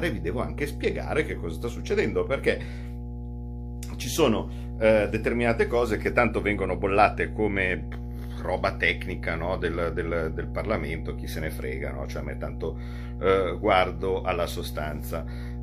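A steady low drone runs under the speech from start to finish, pitched at 60 Hz with a few low harmonics above it, and it sits only a few decibels below the speech itself, so it is plainly audible even while the talker is speaking. This is mains hum: the power line is leaking into the signal path, through a ground loop between connected equipment or through a nearby transformer coupling its field into the cabling.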